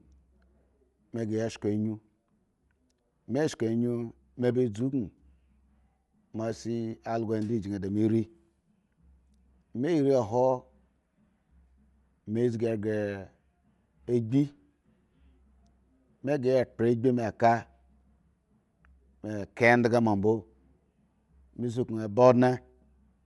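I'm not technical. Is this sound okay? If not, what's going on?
No. The speech has a breathy, grainy edge from start to finish. There is also nothing in it above about 11.5 kHz, so it sounds dull and boxed in. This is likely Bluetooth LC3 compression, the squeezing that wireless earbuds and headsets apply to sound. To save space, the codec throws away much of the high-pitched detail and fills the gap with noise. That fill is the hiss-like roughness you hear on the voice.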